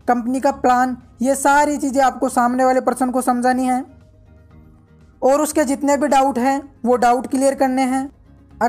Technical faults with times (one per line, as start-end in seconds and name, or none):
none